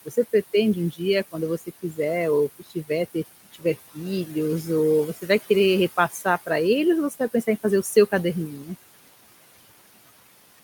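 Noise suppressor artifacts run through the whole clip. The room noise sits about 16 dB under the speech, and the suppressor pulls it down by about 18 dB frame by frame. So the noise sinks in the gaps and swells back under the speech.

There's also speech cut by the noise suppressor at 0.05–0.16 s just before "pretende um", at 1.32–1.99 s ahead of "ou que", and at 2.59–4.29 s between "ou que" and "ou você vai querer". It happens again at 6.1–6.49 s, 7.1–8.13 s and 8.51–8.7 s. In each stretch the suppressor mistakes a brief piece of the speech for noise and ducks it by up to about 16 dB, so soft consonants and endings come out swallowed or faint.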